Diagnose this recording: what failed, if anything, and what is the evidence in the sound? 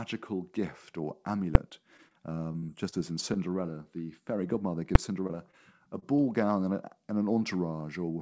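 Two sharp, isolated bangs, at 1.55 s just after "gift or" and again at 4.95 s. These are invalid numbers at full scale in the processing or sample-format stage: a calculation produced infinite or invalid values, which were clamped to full scale for a block of 5 ms. That is too short to split into two pops.

From 1.70 to 2.16 s the sound drags and stutters with four brief holds. The longest is 25 ms, and they total about 59 ms, yet nothing is lost. These are repeated stalls (stutter): late packets drained the jitter buffer, so the receiver extended the last sound until data arrived.

Choppy, robotic stretches run from 2.52 to 2.94 s and from 5.27 to 6.20 s. The second ends just before "gown and a and". These are repeated packet loss (robotic sound) on the network. The first stretch has four holes of up to 26 ms, with about 80 ms missing. The second has five holes of up to 20 ms, with 60 ms missing. 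Each hole was patched by extending the preceding sound.

A brief smear at 4.47 to 4.51 s is short concealed packet loss: 20 ms never reached the decoder in time. The receiver continued the previous sound across the hole and blended back into the real audio. The G.722 call path, with nothing above 8 kHz, fits a 64 kbps setting.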